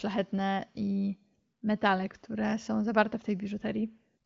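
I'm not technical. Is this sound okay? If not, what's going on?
Yes, there are no faults: this is speech over an AMR wideband (HD Voice) phone link, which stops at about 7.5 kHz, so it has the slightly trimmed top end of an HD call.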